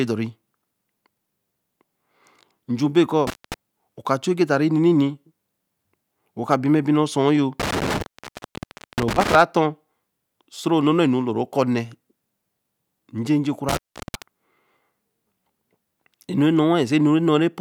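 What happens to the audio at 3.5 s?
An intermittent contact cuts the sound from 3.27 to 3.54 s after "nju be": a loose connection opens for 0.22 s, showing crackle spikes around a near-flat gap.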